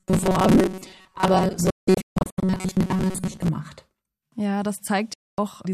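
Speech, with two kinds of fault. From 0.01 to 3.50 s it has robotic sound from repeated short buffers. The voice becomes a rigid, metallic buzz fixed at 188 Hz, and it still loosely tracks the speech. That pitch matches a chunk of about 5.3 ms being replayed over and over. The likely cause is audio arriving too slowly, so the software loops the last fragment to fill the gaps. Roughly 70 percent of the stretch is repeated material, and the real audio in those gaps is skipped.

A digital broadcast dropout hits from 1.70 to 2.43 s, overlapping the buzz. The sound cuts out in several short holes spread over 720 ms, with 480 ms missing in total. The longest hole is 168 ms. Each cut fades in about 3 ms, which points to the receiver muting bad frames, plausibly about 24 ms each. A second dropout mutes 5.14 to 5.38 s, losing 240 ms. Whatever was sent during both gaps is gone.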